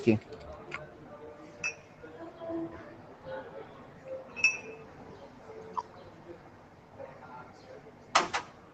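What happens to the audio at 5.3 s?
At 5.3 s the noise suppressor applied to music or sounds is active, as throughout the clip, treating sustained content as noise and pulling it down by around 10 dB, so tails pump and thin.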